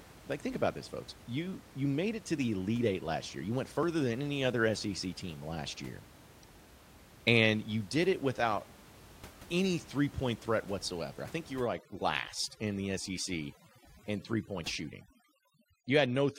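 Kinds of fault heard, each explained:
overdone noise removal: From 11.59 s to the end at 16.39 s, a noise reduction stage is working far too hard, pulling individual frequency bands down or shutting them off whenever they come close to what it takes for noise. The room noise, sitting about 22 dB below the speech before this point, collapses into near silence scattered with twinkling specks, and the quieter parts of the voice are cut away too.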